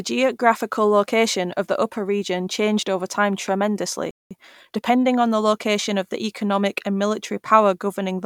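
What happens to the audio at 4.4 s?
At 4.4 s the speech is in a time-compressed catch-up running from 4.31 to 5.09 s, ending just before "on the location of". The player is clearing its backlog by cutting out short pieces and cross-fading across the gaps. Delivery runs at about 1.25 times normal speed with pitch unchanged.

It follows a playback stall from 4.11 to 4.31 s, where the output goes silent for 0.2 s in mid-flow, likely because the player ran out of buffered data or its thread was blocked. When output resumes, the catch-up begins at once.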